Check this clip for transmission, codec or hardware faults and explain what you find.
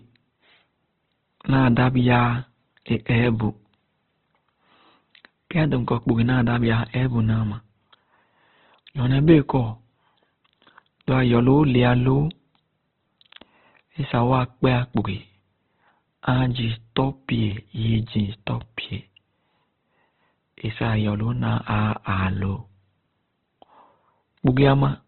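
One codec fault runs through all 25 seconds. Opus compression is the likely cause: the encoder appears starved of bits, which points to a very low rate near 12 kbps in its CELT music mode, narrowed to narrowband. When CELT runs short, it keeps each band's energy but refills detail by folding lower bands or injecting noise. The speech is therefore heavily damaged, sounding grainy, rough and noisy rather than swirly, with nothing above 4.2 kHz.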